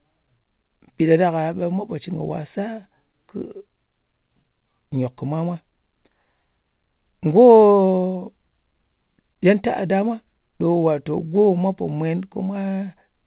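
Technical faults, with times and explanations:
The speech has come through a call link that is working as it should, with nothing above 4 kHz in the signal, a band limit that points to a narrowband telephone codec such as G.711 mu-law at 64 kbps.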